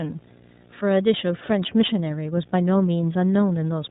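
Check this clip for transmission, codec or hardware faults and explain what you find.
Two faults run through the whole speech clip: video or display buzz, and iLBC codec damage.

Video or display buzz, throughout: a screen or video cable is coupling its field-rate energy into the audio path, so a steady 60 Hz buzz, with a harsh hash of harmonics above it, sits under the speech. It stays at roughly 30 dB below the speech, quiet but constant in pauses, and its edgy, rasping character is what sets it apart from a smooth mains hum.

iLBC codec, throughout: the speech has passed through iLBC, a narrowband VoIP codec that codes each 30 ms frame's excitation independently of the previous one, which fits its 13.33 kbps mode. Everything above 4 kHz is gone, so the speech sounds muffled and telephone-like, and the codec damage is plainly audible as a rough, slightly synthetic graininess.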